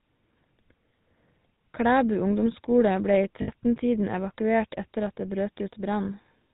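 From the start the speech carries the GSM full-rate codec's signature: a buzzy, gravelly roughness and nothing above 4 kHz. The codec rebuilds the voice from a vocal-tract model excited by regularly spaced pulses, discarding most excitation detail, which fits a 13 kbps stream. Here the damage is plainly audible across the whole clip.

At 3.42 s, lost GSM frames interrupt the speech for about 60 ms, ending at 3.49 s. The missing stretch, consistent with three dropped frames, is filled by repeating the last good frame's settings. That repetition shows up as a brief rough, metallic ring in place of the speech rather than a clean gap.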